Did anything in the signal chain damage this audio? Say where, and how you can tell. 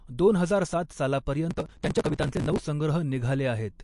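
Yes. Throughout the speech there is plainly audible watery, swirling texture and nothing above 11.3 kHz, likely from MP3 compression at the codec stage, which fits a low bitrate near 48 kbps. Unlike a simple low-pass filter, weak frequency components flicker frame to frame.

Between 1.50 and 2.59 s a processor overload crackle tears through the sound at the driver or buffer stage. Small buffers of roughly 5 ms missed their deadline around 150 times, each skipped outright, leaving hard-edged gaps. Network loss would leave longer, sparser dropouts instead.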